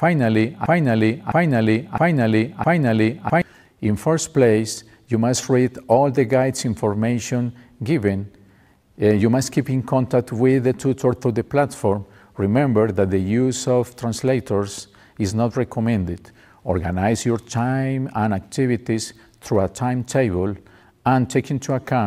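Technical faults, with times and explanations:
0.66 to 3.42 s, broken-record loop: the player or stream likely stalled and kept resending the last fragment it held, so an identical 0.66 s piece plays four times back to back, and the audio meant for that stretch never arrives.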